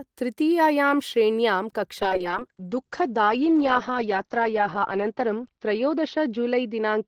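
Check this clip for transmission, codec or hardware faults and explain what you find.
One fault is audible, a call bitrate drop. From 2.03 s to the end, the speech turns muffled and rough as the encoder falls from 32 to 8 kbps, holding the lowest rate for about 2.8 s. Fewer bits mean coarser coding, and the audio band shrinks from 20 kHz to 6 kHz.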